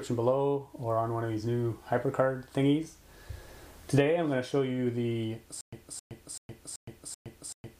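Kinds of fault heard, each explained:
Stutter with silent gaps: from 5.61 s to the end, a short burst of about 268 ms plays, drops into about 115 ms of dead digital silence, then returns identical, six times at a steady 383 ms period. The likely cause is a stalled player or stream replaying its last buffered fragment on each retry before running empty. Unlike a plain dropout or a seamless loop, the same fragment recurs with silence between, and the audio due in that span never arrives.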